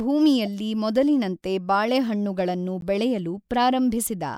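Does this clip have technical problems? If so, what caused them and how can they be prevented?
Yes. There are two corrupt frame decoded events in this speech. A short glitch at 0.45–0.47 s comes just before "ಮೊದಲಿನಂತೆ ಬಾಳೆಹಣ್ಣುಗಳನ್ನು ಬೆಳೆಯಲು", and a briefer glitch at 2.81 s follows "ಮೊದಲಿನಂತೆ ಬಾಳೆಹಣ್ಣುಗಳನ್ನು". Each peaks around -30 dBFS. Flipped bits in compressed frames were decoded anyway, so misread gains and codes put energy at wrong frequencies. Checksums or CRC checks with concealment of failed frames would prevent this.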